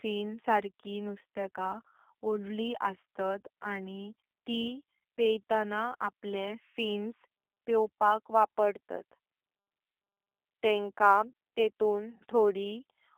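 Throughout the speech, the G.729 codec's damage is plainly audible. The sound is confined to a telephone band of roughly 300 Hz to 3.6 kHz, with nothing above 3.7 kHz. The voice is rebuilt from a filter model and sparse pulses, which gives it a rough, slightly synthetic texture consistent with 8 kbit/s G.729A.

Sample clock jitter also runs the full length. Unstable converter timing places each sample a couple of microseconds off at random, producing an error around 40 dB below the signal. It adds a hiss or grit that grows on louder, brighter passages and disappears in pauses.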